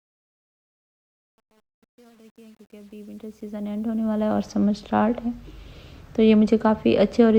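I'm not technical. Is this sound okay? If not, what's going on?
No. The fade-in at the start was processed with too little detail, roughly like working with only 9 bits, so this is truncation distortion on a fade. From 0 to about 3.6 s the quiet sound turns gritty, then clears as the fade finishes at 4.43 s.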